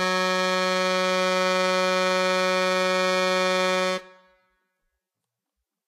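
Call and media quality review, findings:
Vorbis compression, likely at a low bitrate around 26 kbps, throughout the music. Cut-off at 14.1 kHz, nothing above. Treble quantised so coarsely that fine detail turns to noise of similar energy. Symptom: plainly audible hiss and grain, roughened tones, blurred attacks.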